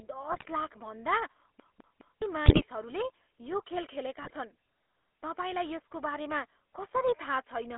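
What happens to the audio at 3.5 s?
GSM full-rate codec coloring is present at 3.5 s, as it is throughout the clip. The codec rebuilds the speech from a model of the vocal tract excited by a train of evenly spaced pulses that keeps only every third sample, which fits a 13 kbps full-rate stream. At that moment the speech sounds plainly buzzy and gravelly, confined to a narrow band from about 300 Hz to 3.5 kHz with nothing above it.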